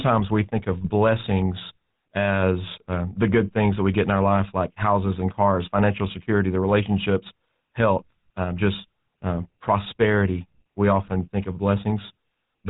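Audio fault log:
Throughout: GSM full-rate codec. The speech has a plainly audible buzzy, gravelly roughness. The codec rebuilds the voice from a vocal-tract model driven by sparse, regular pulses. Nothing above 4 kHz survives, so the sound is dull and band-limited. The coding rate fits 13 kbps.
0.81 to 0.90 s and 11.06 to 11.12 s: GSM bit errors. The speech briefly breaks into squawks and gargling. Corrupted bits reached the decoder, which fits an error rate of around 1 to 1.5 percent. Bad filter, pitch or gain values distort the spectrum or level for a few frames.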